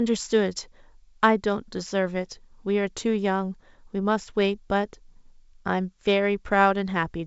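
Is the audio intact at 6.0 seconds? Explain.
Yes, the audio is intact at 6.0 seconds, with the speech coming through the 64 kbit/s G.722 wideband path with no audible fault.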